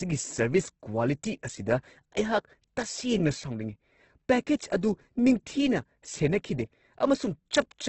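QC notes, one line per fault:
Throughout: Opus compression. Nothing is heard above about 8.2 kHz, so the top of the spectrum is simply gone. The speech sounds rough and grainy, with a noisy texture laid over the tones. There is little swirling. The cause is likely heavy Opus encoding in its music mode, at a rate that fits roughly 12 kbps. With so few bits, the encoder keeps each band's energy but fills the detail with folded copies or noise.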